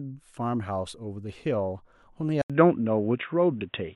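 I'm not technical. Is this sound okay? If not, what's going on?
No. At 2.42 s the speech cuts out for a split second, then stays duller and boxier to the end, likely an input switched to a poorer device.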